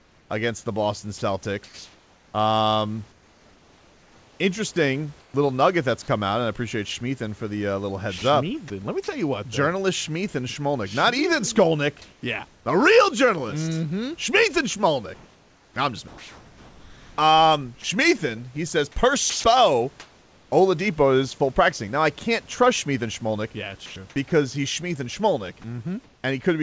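From 0.00 to 5.34 s the speech is chopped by the voice detector, likely because it toggled sending on and off repeatedly; about 2.5 s of that stretch is filled with comfort noise, so quiet syllables and word edges keep vanishing. The same choppiness, likely from the same toggling, recurs more briefly at 8.18 to 9.08 s (about 0.1 s filled), 16.08 to 17.84 s (about 1.1 s) and 23.86 to 24.32 s (about 0.12 s). What marks it out is the repeated switching within ongoing speech.

From 12.02 to 12.66 s the background is swapped for comfort noise, likely because the sender paused transmission during a gap; about 0.38 s of real room noise becomes a smooth, featureless hiss. This recurs, likely for the same reason, at 19.30 to 20.52 s (about 0.66 s) and at 26.04 to 26.24 s. In that last spot the room sits about 37 dB below the loud parts and the fill lands about 2 dB off the real level. Unlike the chopping, no speech is touched, only the background's texture.

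At 19.30 to 19.44 s sound is dropped by the voice detector, likely because it mistook quiet speech for background; roughly 90 ms of speech disappears into 140 ms of steady noise. This is a single clean dropout rather than repeated flicker. Throughout, the G.722 call path cuts everything above 8 kHz.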